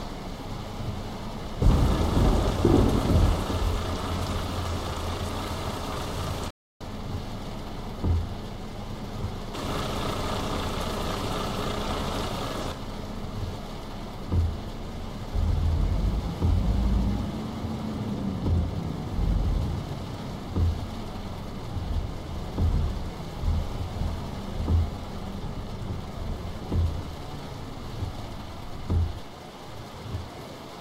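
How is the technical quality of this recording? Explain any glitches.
There is one glitch, a playback stall from 6.50 s to 6.81 s. The audio stops mid-flow and the output drops to silence for about 300 ms, then carries on. The likely cause is the player running short of buffered data, or its audio thread being held up, so nothing reached the output until it recovered. The result is an abrupt hole in the sound.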